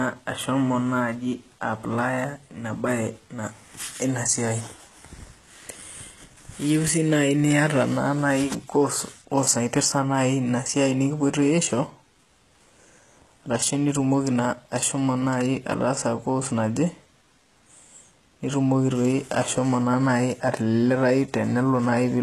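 Throughout, s sounds turn gritty and lispy, with nothing above 12.3 kHz. The likely cause is HE-AAC compression near 16 kbps, rebuilding the treble from copied lower bands.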